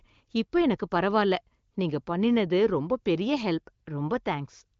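No faults can be heard in this wideband-coded speech.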